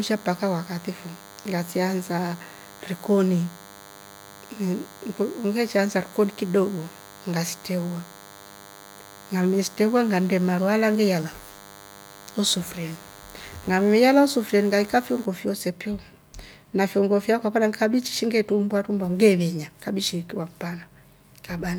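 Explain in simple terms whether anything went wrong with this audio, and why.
From the start until 15.25 s, just before "fyoose piu", a thin, steady buzz runs under the speech. This is DECT cordless phone buzz: a nearby cordless phone sends radio pulses 100 times a second, and the audio circuit turns them into sound. Unlike mains hum, it sounds raspy and edgy rather than smooth and deep.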